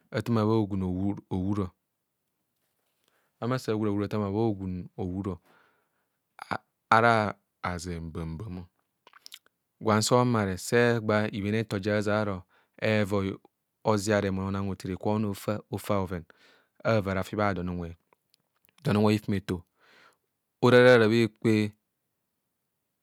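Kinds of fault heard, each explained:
Drift correction step: Twice the speech lurches off its natural speed and pitch together, then snaps straight back. From 7.25 to 8.45 s it drops about 6% slower and 106 cents flat, just over a semitone. From 15.19 to 15.90 s, right after "remou ona hothene kwe", it runs about 6% fast and 100 cents sharp. That pattern is likely a clock-matching routine nudging the playback rate in one jump to rebalance its buffer.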